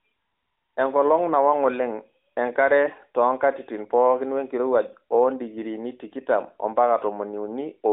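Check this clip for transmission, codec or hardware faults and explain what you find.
No transmission, codec or hardware faults.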